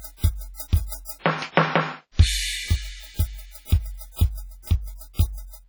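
From the start to the end of this music clip runs heavy transform-codec damage, likely WMA compression at a low rate, around 32 kbps. The quantisation noise, smeared over long blocks, gives a ringing, washy texture and a hiss that swells and sinks with the music, while quieter detail drops out. On a spectrogram the upper bands look patchy and blotchy, with holes where weak components were zeroed, though content reaches up to about 20.1 kHz.

Four pre-echoes stand out: at 0.54 to 0.60 s (59 ms), 0.86 to 0.92 s (58 ms), 1.52 to 1.57 s (47 ms) and 5.13 to 5.19 s (56 ms). In each, a sharp attack landed late in a coding block, so noise scaled to the loud hit spilled back into the quiet moment before it. You hear a brief hiss ahead of the attack, which itself sounds softened. In the waveform a fuzzy ramp precedes each transient; the spectrogram shows a broadband smudge leading the onset.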